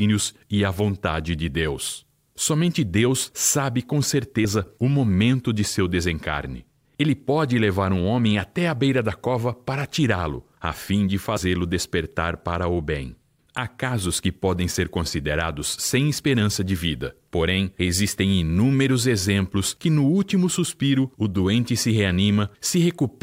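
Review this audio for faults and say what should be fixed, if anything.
Compressed frames skipped at 11.36–11.41 s, between "a fim de" and "despertar para o bem". About 70 ms of audio vanishes. Preventing it means verifying file integrity and re-fetching or repairing damaged frames before decoding.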